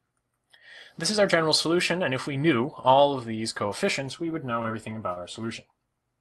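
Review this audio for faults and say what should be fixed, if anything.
Repeated stalls (stutter), 4.03 to 5.18 s: the jitter buffer ran empty six times, longest 34 ms, and the last sound was held over, so the audio drags rather than dropping out as with packet loss. A deeper or better-adapting jitter buffer on the receiving end would absorb the late packets and prevent it.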